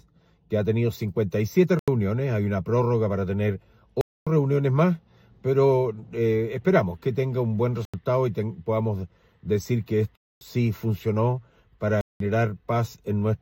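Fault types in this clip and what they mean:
Block of digital silence: at 1.79, 4.01, 7.85, 10.16 and 12.01 s the sound cuts straight to silence and back. The holes last 85, 256, 85, 256 and 193 ms, the 85 ms ones fitting an unfilled 4096-sample buffer.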